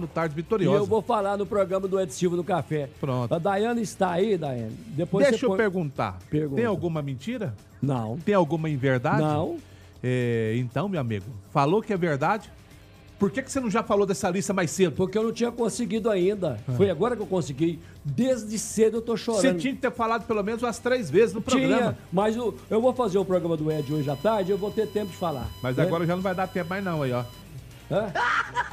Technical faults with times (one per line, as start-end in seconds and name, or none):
23.70-27.42 USB whine